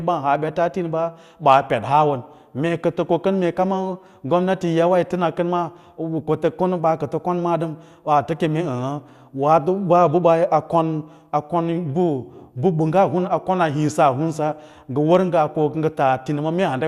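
Nothing in this recording calls for comment, as no technical faults turn up anywhere along its course.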